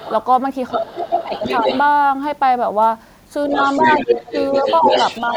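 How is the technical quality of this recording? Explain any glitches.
The recording has clear echo-control problems: the far-end talker bleeds into the capture, and the near-end speech is pulled down in places while both sides talk.

Other side's voice leaking through appears at 0.00–0.13 s, 0.69–1.81 s, and from 3.54 s to the end. A second voice sits under the main talker. It starts well below the talker, comes closer in the middle stretch, and in the final section is nearly as loud. The likely cause is an echo canceller that left part of the loudspeaker playback in the microphone signal.

Speech suppressed in double talk occurs at 0.71–1.46 s and 3.52–4.86 s, overlapping the leak. The likely cause is that, with both parties speaking, the canceller could not separate the talker from the echo and attenuated everything. In each window the near-end voice dips, adding up to a few hundred milliseconds. 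The first window drops by roughly 20 dB and the second by roughly 10 dB.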